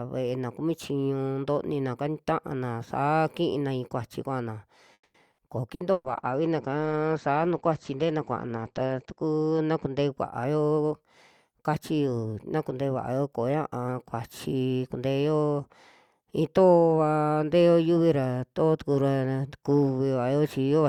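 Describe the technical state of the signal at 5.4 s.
At 5.32 to 5.41 s there is a burst of packet loss. The receiver concealed about 60 ms by extending and fading the last sound into a buzz or hiss, then resumed about 60 ms further on. Unlike a plain dropout, the gap is filled rather than silent.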